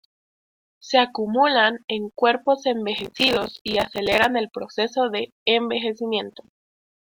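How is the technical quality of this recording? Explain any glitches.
The recording has two bursts of processor overload crackle, from 2.98 to 4.24 s (between "acumulan en cuerpos" and "el proceso de") and from 6.32 to 6.53 s. The processor fell behind and missed buffer after buffer, dozens in the first burst and only a handful in the second. Each missed slot replayed a stale fragment of earlier audio with hard edges, and the grain suggests buffers of roughly 5 ms. The result is a gritty, tearing crackle over the speech that stops abruptly once the load clears.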